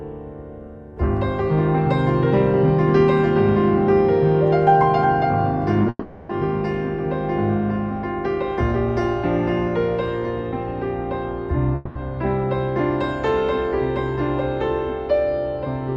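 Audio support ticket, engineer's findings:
Short concealed packet loss, 5.82 s and 5.87 s: two gaps, about 10 ms each, arrived too late for the decoder. The receiver extrapolated the preceding sound across each gap and crossfaded back, leaving two brief smears or wobbles just before the longer break.

Long network dropout, 5.89–6.30 s and 11.75–11.96 s: audio stops arriving, likely a network stall. Concealment stretches the last sound into a fading buzz. The first gap runs about 0.4 s and ends in a short near-silent stretch; the second, about 0.2 s, stays filled throughout. Lost material is not recovered. Both fall on an Opus call path at 48 kbps whose top end stops near 12 kHz.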